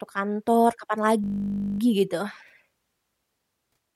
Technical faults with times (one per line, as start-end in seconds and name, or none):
1.24-1.80 system hang loop